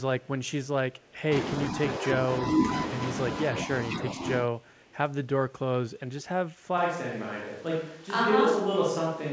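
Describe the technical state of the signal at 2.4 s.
At 2.4 s the speech is intact, with no dropout, click or distortion; it has passed through a call path whose band stops at about 8 kHz, which fits a wideband codec such as G.722.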